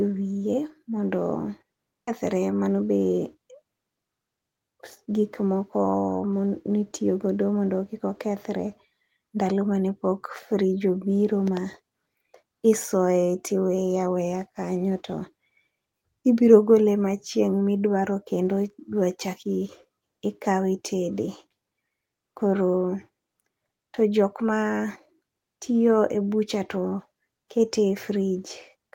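A speech clip in which, at 2.07 s, the talk abruptly jumps forward with no gap, and about a second of speech is simply gone, the two sides butting together. This is a skip ahead: a stretch of audio was discarded, likely by an overflowing jitter buffer, so playback resumed from what was already queued. Shortly after, from 2.67 to 3.05 s, the speech sounds hurried, running at about 114% speed while the pitch stays unchanged. That is a jitter buffer speed-up, where the receiver trimmed tiny pitch-period slices, about 70 ms in total, to drain excess buffered delay.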